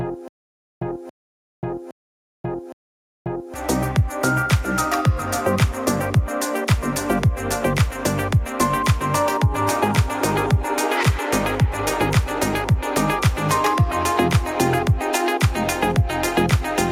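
Stutter with silent gaps runs from the start to 3.54 s, already under way as the clip opens: the same 279 ms burst repeats four times, each followed by 536 ms of digital silence, an even 815 ms cycle, likely a stalled stream replaying its last fragment while the intended audio is lost.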